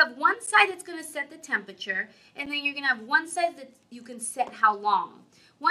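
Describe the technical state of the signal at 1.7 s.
Around 1.7 s the signal is intact, with no dropout, distortion, glitch or other audible fault at that point.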